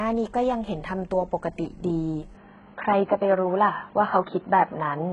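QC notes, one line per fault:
throughout: HE-AAC compression. The speech has heavy codec damage and nothing above 10.7 kHz. The treble sounds synthetic, with gritty, lispy s sounds and upper harmonics that fail to line up. This likely comes from spectral band replication at a very low rate, fitting roughly 12 kbps.
2.35 s to the end: input switched to a poorer device. The band suddenly narrows to nothing above 4.2 kHz, so the speech turns dull and boxy. There is no gap at the switch. The level shifts by around 5 dB, and new background noise appears roughly 35 dB down. A likely cause is a change to a lower-grade microphone or headset path.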